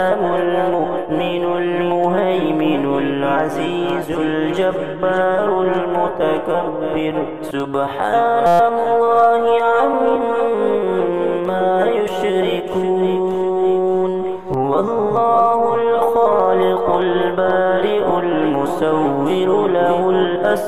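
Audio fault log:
0.19 to 20.7 s, clock drift buffer slips: likely two devices running on independent clocks, around 100 ppm apart, so the buffer between them drifts until a handful of samples is dropped or repeated. This recurs every 1.86 s, giving a regular click while there is signal.
8.46 to 8.60 s, system hang loop: the system briefly froze while the hardware kept replaying one 5.8 ms block, which fits a 256-sample buffer. It looped 23 times, heard as a steady buzz at 172 Hz, with almost no audio lost.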